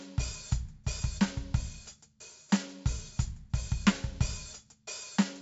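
Throughout the music, 4-bit ADPCM compression leaves a gritty hiss that swells and shrinks with loudness and roughens sharp attacks, heavily here. Unlike the swirling, watery artefacts of perceptual codecs, this noise is broadband and follows the level. Nothing reaches above 7.7 kHz, which fits a 64 kbps stream.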